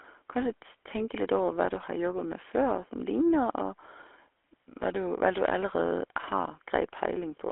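Speech, passed through the GSM full-rate codec for the whole clip. The codec rebuilds the voice from a vocal-tract model driven by regularly spaced pulses, discarding two of every three excitation samples, which leaves a plainly audible buzzy, gravelly roughness consistent with a 13 kbps GSM channel. A spectrogram shows energy confined to a 300 Hz to 3.4 kHz telephone band with nothing above 4 kHz and smeared, coarse harmonics.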